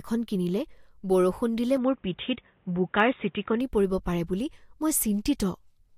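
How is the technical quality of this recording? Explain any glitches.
The recording has one clear fault, likely an input switched to a poorer device. From 1.77 s to 3.61 s, between "এখন কিনিলে বৰষুণ দিলে" and "পৰিব পাৰে বুলি", the speech turns dull and boxy, with nothing above 3.8 kHz. This fits a different microphone or headset call profile with a narrower passband. The switch is seamless and loudness stays about the same, but a faint new noise floor appears, roughly 40 dB under the speech. Full bandwidth returns at 3.61 s.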